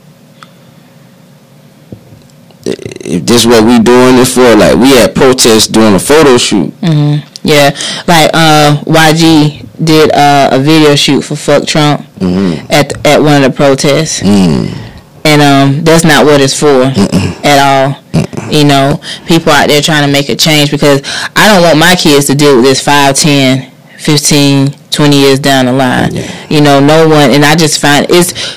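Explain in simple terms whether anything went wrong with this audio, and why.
The speech is badly overloaded from start to finish, a fault called hard clipping. The signal was far too loud for the recording chain, so its peaks were sliced flat, roughly a fifth of the time. Unlike background hiss, this harsh fuzz rides on the speech itself.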